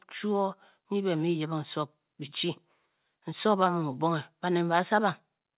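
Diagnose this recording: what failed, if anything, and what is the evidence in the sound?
Nothing failed; no faults heard.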